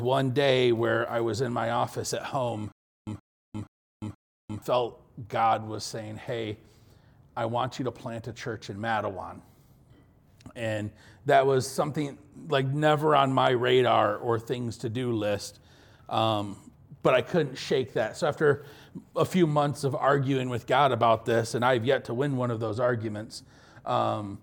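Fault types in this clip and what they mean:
Stutter with silent gaps: from 2.72 to 4.62 s the same burst of about 125 ms plays four times, each followed by about 351 ms of dead digital silence, so it returns at an even beat of roughly 475 ms. Whatever audio belonged in that stretch never comes through. The likely cause is a stalled player or stream that replayed its last buffered fragment on each retry, then ran dry before fresh data arrived.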